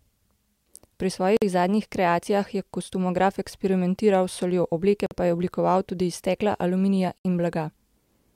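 Three brief dropouts cut into the continuous speech: at 1.37 to 1.42 s (about 50 ms), 5.06 to 5.11 s (about 48 ms) and 7.18 to 7.25 s (about 67 ms). Each opens and closes abruptly, slightly softened at the edges, and the speech resumes exactly where it stopped. These are gaps at a join of encoded pieces: separately encoded segments were spliced without trimming, so each encoder's start-up silence and final-frame padding remain between them.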